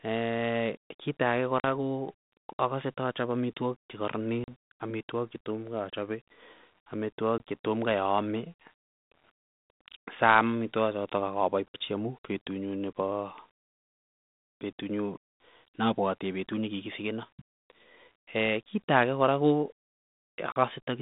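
Packet loss on an ADPCM call cuts hard-edged gaps at 1.6, 4.44, 7.38, 11.68 and 20.52 s. Each lasts 20 to 60 ms, roughly one to three packets. Afterwards the decoder's predictor is out of step, so speech returns with brief distortion.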